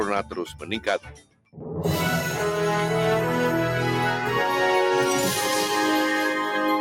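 A speech-tuned noise suppressor is processing this sound throughout, pumping its level by around 5 dB as sustained parts sink while attacks pass, unlike a compressor, which would follow loudness. The noise suppressor cuts the sound from 0.5 to 0.66 s (about 9 dB) and from 0.99 to 1.73 s (about 18 dB), pulling down held material and decays while transients survive, which rules out a simple dropout.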